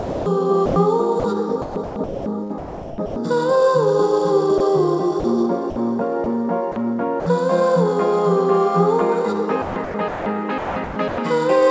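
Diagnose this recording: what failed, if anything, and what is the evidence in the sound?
Sound chopped by the voice detector, at 0.0 to 3.16 s, 5.2 to 7.26 s and 9.62 to 11.18 s, is a call-processing fault. Across these stretches, about 1.44 s, 0.22 s and 0.82 s of sound respectively give way to synthetic comfort noise. The likely cause is the sender's voice activity detector toggling transmission on and off around quieter passages, with the receiver filling each gap with generated noise.

Sound dropped by the voice detector occurs at 4.58 s, where a 20 ms slice of sound is lost and steady comfort noise stands in for it before the signal resumes. This is also a call-processing problem. The likely mechanism is that the detector briefly judged a quiet moment to be background and stopped sending, then reopened as soon as it triggered again. The band-limited sound, with nothing above 8 kHz, fits the G.722 call codec in the path.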